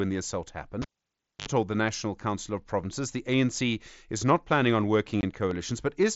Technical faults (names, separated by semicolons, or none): cable pulled and plugged in; dropped samples; unconcealed Bluetooth headset packet loss